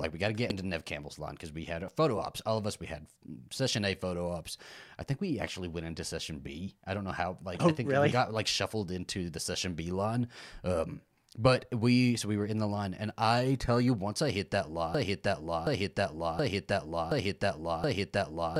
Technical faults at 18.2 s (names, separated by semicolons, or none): broken-record loop